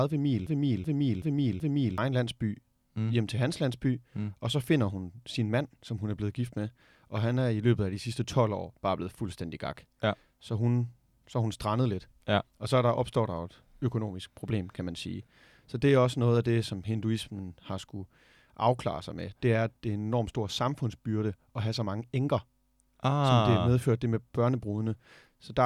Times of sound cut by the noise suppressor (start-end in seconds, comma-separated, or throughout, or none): none